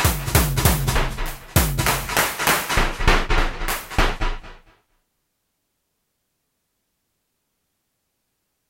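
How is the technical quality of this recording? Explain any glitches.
Listening through the recording, nothing stood out as a technical problem.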